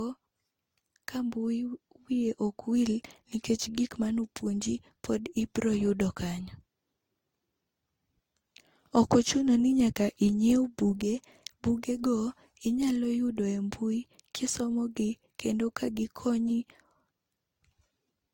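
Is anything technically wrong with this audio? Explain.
Yes. Transcoding between lossy codecs runs throughout: the speech likely passed through a low-rate codec, fitting Opus near 32 kbit/s, then was re-encoded, fitting Vorbis near 63 kbit/s. The second encoder spends bits preserving the first one's artefacts and adds its own artefacts. Both blur together, and nothing remains above 16.7 kHz.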